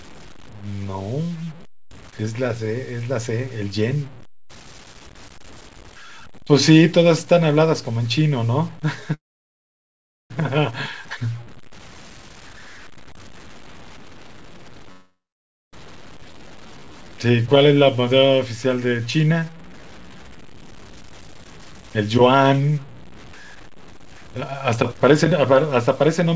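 Speech carried over a call link, with nothing above 8 kHz, which fits a G.722 codec at 64 kbps, and with a grainy, gritty distortion that tracks the sound throughout, sitting roughly 25 dB below the signal and roughening quiet stretches. That grain is likely low bit depth without dither, with samples truncated to something like 7 bits. From 9.14 to 10.32 s the audio stalls into about 1.1 s of silence, then resumes where it stopped. This is likely a call audio freeze, where late packets left the jitter buffer empty, adding a gap without losing speech. Between 13.96 and 14.91 s the speech rushes at nearly double speed (198%) while keeping its pitch. A jitter buffer speed-up trims about a second of pitch periods to shed excess delay. Straight after, 14.92 to 15.75 s brings a second stall, with about 0.55 s of it silent, again likely a call audio freeze. At 16.21 s playback jumps forward abruptly, a skip ahead that drops roughly half a second of speech and splices the two sides almost directly. 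From 16.26 to 20.41 s the speech drags at 86% speed, pitch unchanged, with drawn-out sounds. This jitter buffer slow-down repeats pitch periods, adding 570 ms to rebuild a reserve. From 23.56 s to the end the speech hurries again at 136%, a further jitter buffer speed-up removing about a second of audio.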